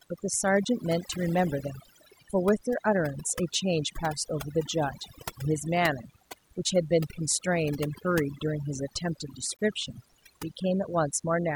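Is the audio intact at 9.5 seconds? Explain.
No. A corrupt frame was decoded from 9.53 to 9.60 s. Damaged compressed data was played anyway, putting energy at the wrong frequencies. A chirp, squeak, blip or burst of noise results, which fits a few bad frames.

A DECT cordless phone buzz also runs through this moment. Radio bursts every 10 ms get rectified into a thin 100 Hz buzz, about 20 dB below the speech.

Overdone noise removal is also present. Bands near the noise floor are cut hard, so the background twinkles.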